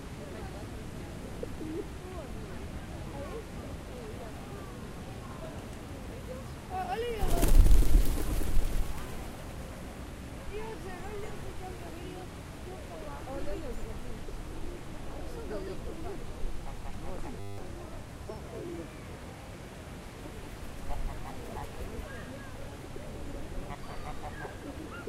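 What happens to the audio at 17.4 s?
At 17.4 s there's a system hang loop until 17.58 s. The system stalls while the hardware keeps replaying the same 10 ms buffer, about 18 times, so you hear a flat 100 Hz buzz, and about a fifth of a second of sound is lost.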